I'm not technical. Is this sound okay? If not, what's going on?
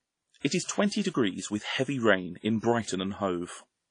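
No, not quite. The whole clip has plainly audible damage from squeezing the file down, most likely from WMA compression. To shrink the file, the encoder throws away detail it thinks you won't miss. Here that means nothing above about 10 kHz, so the speech loses its crisp top end. The leftover errors smear over short stretches of time. That gives a ringing, washy sound, with a hiss that rises and falls along with the speech.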